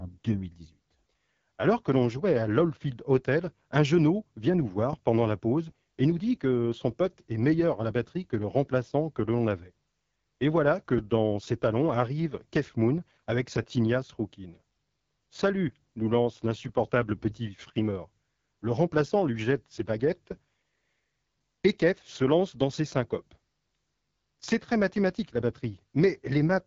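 From start to finish the speech carries AMR wideband (HD Voice) codec damage, and it is plainly audible. The codec models the vocal tract driven by pulse excitation up to 6.4 kHz and substitutes shaped noise above that, with nothing above 7.3 kHz. The rough, raspy texture across the speech fits one of the two lowest AMR-WB rates, around 8.85 kbit/s, where the excitation model has too few bits to reproduce the voice cleanly.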